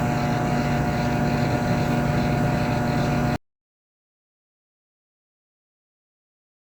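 At 3.36 s the sound just cuts out, and from there to the end it's an audio dropout to silence: dead silence, no room tone at all. Most likely the input got lost, through a pulled connection or a stray mute, while recording carried on.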